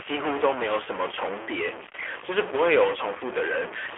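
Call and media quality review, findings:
Distortion present throughout, with gaps between phrases filled by noise instead of falling quiet. Likely a stuck bit: one data line or converter bit held fixed, so about half the samples are offset by that bit's weight, shifting with the waveform's sign near silence.

AMR narrowband mobile codec across the full clip, with plainly audible damage. Band limited to about 300 Hz to 3.4 kHz, and the pulse-driven vocal-tract model gives the speech a thin, synthetic, buzzy quality. The coarseness fits a mid-rate mode around 10.2 kbps.

Lost AMR speech frames at 3.18 to 3.22 s: a single 20 ms frame failed the radio checksum. The decoder repeated the previous pitch and vocal-tract settings at reduced gain, causing a brief dip or warble before normal decoding resumed.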